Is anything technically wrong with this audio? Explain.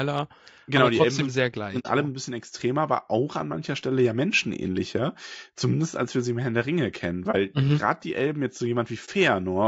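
Yes. The speech is rough and grainy throughout, with a noisy haze between the harmonics and a thin, somewhat synthetic top band. This points to low-delay AAC compression, likely AAC-ELD at around 32 kbps. Its short transform frames cannot separate closely spaced pitch harmonics well and use up bits quickly, so quantisation noise fills the gaps between harmonics and the highest frequencies are rebuilt rather than coded. The damage is plainly audible.

There are also three dropouts from AAC frame loss with muting. Missing frames had their spectrum zeroed, and the overlapping windows fade the sound down and back up, leaving a brief dip for a single frame and a soft-edged hole for a run. The first runs from 1.79 to 1.87 s, about 60 ms, which fits two lost frames, and sits just before "alle ein bisschen extremer". The second runs from 7.31 to 7.35 s, just before "mhm gerade die". The third runs from 9.05 to 9.09 s, just after "jetzt so". 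The second and third gaps are each about 30 ms, which fits a single lost frame.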